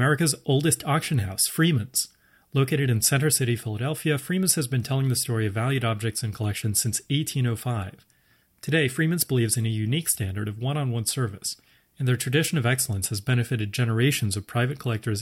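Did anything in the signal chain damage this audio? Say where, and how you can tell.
No, nothing in this speech recording points to damage at any stage of the signal chain.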